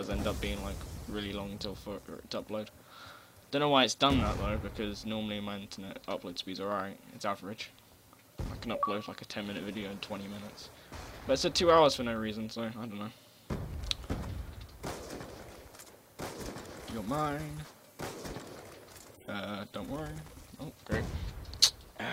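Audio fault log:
17.65 s and 19.28 s, compressed frames skipped: the decoder never played whole 32 ms frames, dropping about two at 17.65 s and about four at 19.28 s. The sound jumps ahead by roughly 70 ms and 150 ms.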